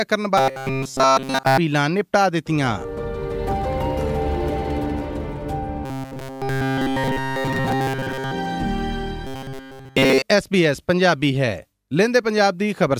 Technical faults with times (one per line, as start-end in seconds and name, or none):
0.37-1.57 robotic sound from repeated short buffers
5.85-8.31 robotic sound from repeated short buffers
9.27-10.22 robotic sound from repeated short buffers